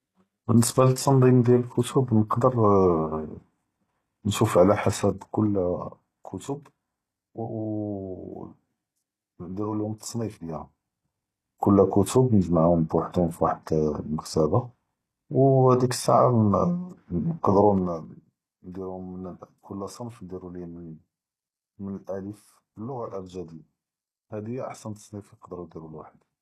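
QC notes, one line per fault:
Throughout: HE-AAC compression. The speech has plainly audible codec damage, and nothing sounds above 12.3 kHz. The treble is likely rebuilt by spectral band replication, copied up from lower bands. Its harmonics do not match, so sibilants sound gritty. This fits a low bitrate near 16 kbps.
4.83–6.41 s and 17.65–18.11 s: zipper noise. The first run comes just after "נושוף עלא". The level drops in unsmoothed 3 dB steps, each one a small click. The first drop is about 10 dB at roughly two steps a second. The second is about 15 dB at roughly ten a second.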